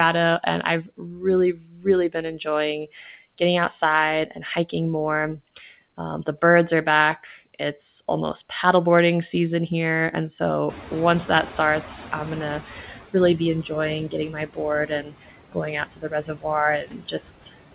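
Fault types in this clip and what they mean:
Noise suppressor artifacts: the steady background is pulled down by about 17 dB between phrases, then swells back under the speech.
Speech cut by the noise suppressor: quiet stretches get mistaken for noise and dropped by up to about 19 dB, so soft consonants and word endings sound swallowed.
Noise suppressor catching up: the room noise jumps near 10.5 s and leaks through with only about 11 dB of reduction, settling over 2.1 s as the estimate adapts.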